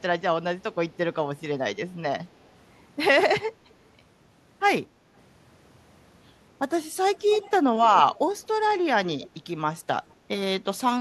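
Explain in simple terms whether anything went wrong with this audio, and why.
Something did go wrong near the end: an echo leak. From about 7.19 to 7.51 s, 7.82 to 8.19 s, 8.43 to 8.47 s, 9.06 to 9.29 s and 10.11 to 10.15 s, a faint second copy of the speech trails the original by 242 milliseconds, about a quarter of a second. The first scrap is the clearest. The next two longer ones are quieter, and the two very short ones are barely audible. The likely cause is a speakerphone on the other end whose echo cancelling missed some of the sound its microphone caught and sent it back. Room reverberation is different: it is a smooth tail that blurs every sound. This is a distinct, delayed repeat that comes and goes in scraps.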